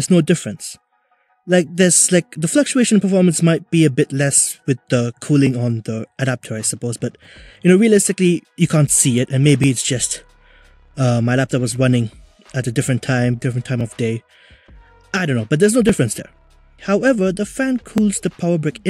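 A regular click recurs about every 2.08 s from 1.29 s to 17.98 s, around ten in all, each a pop wherever there is signal. This is likely clock drift buffer slips: two devices on separate clocks let the buffer fill or drain until about 70 samples are dropped or repeated, which fits a mismatch of several hundred parts per million. On a spectrogram the slips appear as evenly spaced thin vertical broadband lines. The waveform shows a step or discontinuity at each one.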